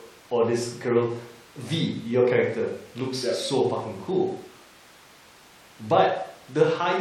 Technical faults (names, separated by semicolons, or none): none